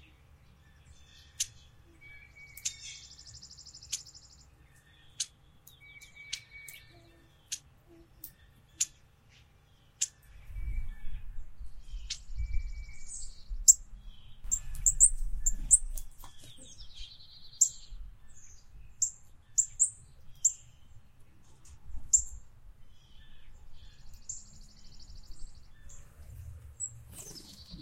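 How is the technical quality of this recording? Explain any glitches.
The recording has one audible glitch, a single click at 15.66 s. It is most likely a case of dropped samples: a handful of samples, a fraction of a millisecond's worth, went missing from the stream, so the waveform jumps straight from one value to a later one. That step is heard as one sharp tick and shows as a thin vertical line across the spectrum. Unlike a dropout, there is no gap or silence, and nothing of the sound itself is lost.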